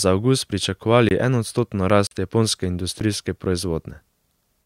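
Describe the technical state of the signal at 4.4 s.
At 4.4 s the signal is intact, with no audible technical fault at that point.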